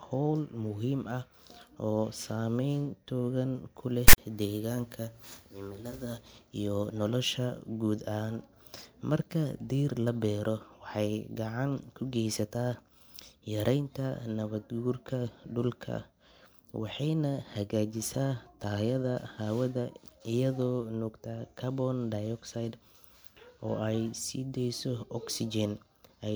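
At 4.08 to 4.18 s, file tags played as audio: text bytes make a hard-edged, off-centre rasp, then zero padding goes silent, drawn as a shifted waveform block ending flat.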